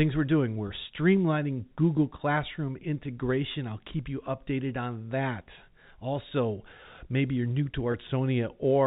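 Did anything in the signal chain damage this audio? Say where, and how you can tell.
Yes, at the network stage. Two brief buzzy, held-over moments occur, from 0.68 to 0.70 s and from 7.92 to 7.94 s, the second just after "maybe you're new to". Each is packet loss with pitch repetition. The receiver bridged a gap of about 20 ms, which fits a single lost packet, by repeating the last pitch period. Each gap is too short to fade to silence. The G.711 telephone band around it carries through cleanly.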